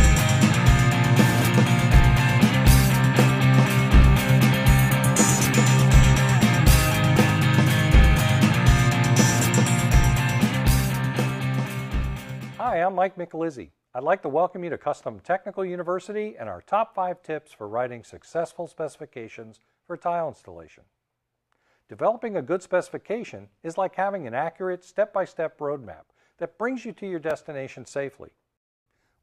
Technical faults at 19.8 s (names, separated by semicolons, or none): none